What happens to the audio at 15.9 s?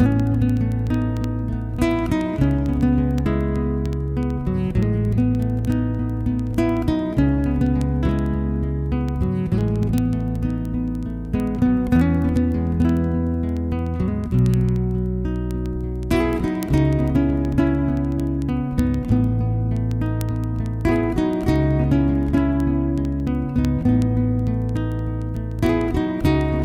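At 15.9 s you're in the middle of a run of word clock ticks lasting from 0.12 s to 26.64 s. The receiving device isn't locked to the sender's clock, so every 70 ms or so a single sample slips and you hear a tick, at a steady rate but of uneven strength.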